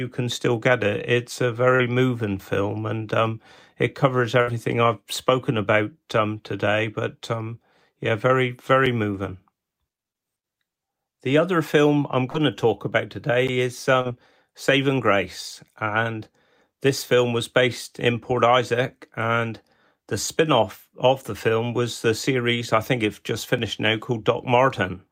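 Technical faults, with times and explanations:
1.75–1.81 s, 12.30–12.36 s and 14.01–14.07 s: short concealed packet loss. About 40 ms of speech never arrived each time, and the receiver stretched the preceding sound to cover it. Each is heard as a brief smear or wobble. On a spectrogram, the continued sound runs on unnaturally smooth, then blends back.
4.41–4.49 s: burst of packet loss. About 60 ms went missing in a row. Concealment held the last sound and faded it, giving a short decaying buzz or hiss before speech resumes further on. The waveform shows a shrinking, repetitive stretch, and the spectrogram a steady band dimming out.
8.86 s, 13.48 s and 23.58 s: block of digital silence. Gaps of about 5.3 ms, 10.7 ms and 2.7 ms, which fits buffers of 256, 512 and 128 samples left unfilled, each cut abruptly to silence. They sound as a tick or pop. The waveform shows a flat line with vertical edges, and the spectrogram thin broadband stripes at each edge.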